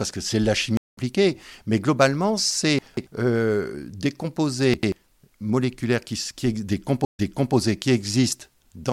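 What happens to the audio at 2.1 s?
Nothing goes wrong at 2.1 s; the audio plays through that moment intact, with no dropout, click or distortion to be heard.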